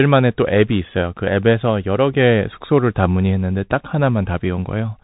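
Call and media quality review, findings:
Bluetooth CVSD headset codec, throughout the speech. Hard band limit at about 3.8 kHz. Scratchy s sounds, granular hiss under speech, slope distortion on loud high content, plainly audible. Component: headset link in narrowband voice mode, a one-bit up/down coder whose adaptive step cannot track fast rises, consistent with a 64 kbps CVSD stream.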